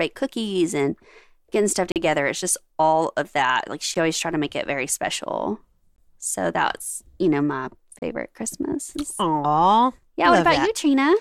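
Gaps between stream segments occur at 1.92–1.96, 3.94, 5.96–5.98, 7.99–8.02 and 10.03 s, every 2 seconds. Segment timestamps leave silent, hard-edged holes of 4 to 40 ms, though no speech is lost.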